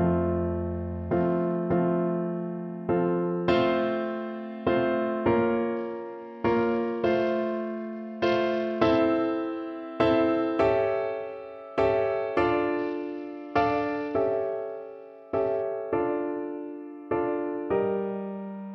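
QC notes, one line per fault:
0.62–1.75 s, 5.77–8.99 s and 12.79–15.62 s, Bluetooth SBC bit pool drop: treble goes dull and gritty, which fits the encoder falling from bit pool 31 to about 9 (around 72 kbps), starving the upper sub-bands.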